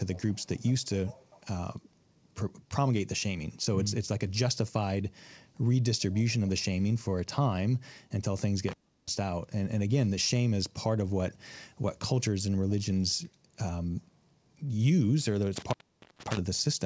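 Echo leak at 0.14 to 0.86 s and again at 1.07 to 1.45 s: a faint delayed copy of the speech trails it by about 0.4 s, roughly 25 dB below. It is likely a far-end loudspeaker whose echo canceller let part of the microphone pickup through.

Intermittent contact at 8.68 to 9.09 s and at 15.56 to 16.37 s: a loose connection breaks the signal, which drops out for about 0.34 s and then about 0.47 s. Each dropout has crackle at its edges and faint hiss in the gap. The call band, with nothing above 8 kHz, stays band-limited throughout.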